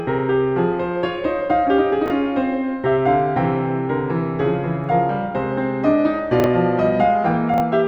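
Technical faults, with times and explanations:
2.06–2.10 s, 6.40–6.46 s and 7.54–7.60 s: chunks out of order. A 20 ms block of the music plays one slot late at 2.06 s and two slots late at the other two. Nothing is missing, but each swap leaves three hard joins, so each spot sounds like a brief jumbled stutter.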